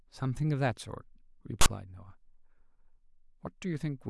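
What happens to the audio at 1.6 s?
File tags played as audio, from 1.61 to 1.66 s: a text tag block is decoded as samples, producing a loud, one-sided rasp with abrupt hard edges in the speech.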